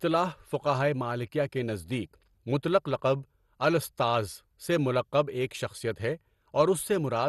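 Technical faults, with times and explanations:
Throughout, MP2 compression: dull, gurgling, granular speech, likely from low-rate Layer II coding; the spectrogram shows nothing above 12.2 kHz and upper sub-bands flickering on and off.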